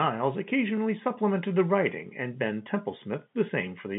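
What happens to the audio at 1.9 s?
Nothing goes wrong at 1.9 s: the speech carries on intact through that moment, with only the narrow, telephone-band character of the G.711 line coding around it.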